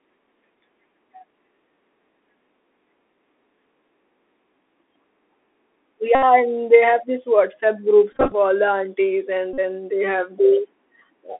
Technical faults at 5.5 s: Bluetooth CVSD headset codec

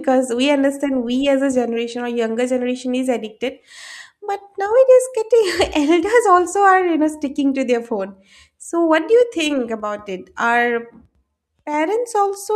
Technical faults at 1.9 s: none

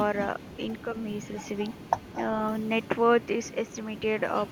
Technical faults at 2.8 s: echo leak

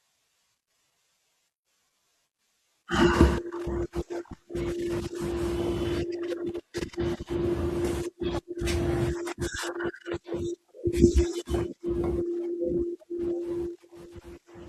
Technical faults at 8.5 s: overlap between stream segments

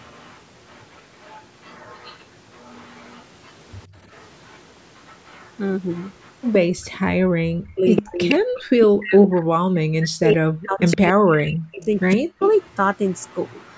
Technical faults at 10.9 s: speech suppressed in double talk; echo leak

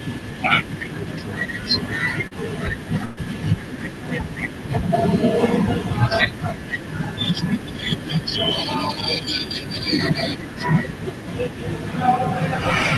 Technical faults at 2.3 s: short concealed packet loss

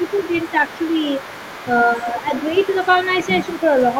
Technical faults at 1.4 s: other side's voice leaking through

